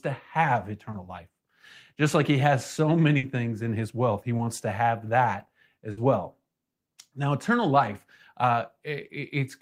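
Speech with packet-loss damage in two forms. Short concealed packet loss at 0.91–0.95 s and 4.37–4.41 s: about 20 ms never arrived and was patched by extending the preceding sound, leaving a brief smear. A burst of packet loss at 3.17–3.25 s and 5.91–5.99 s: about 60 ms went missing, filled with a continued, fading copy of the prior sound before playback resumes later.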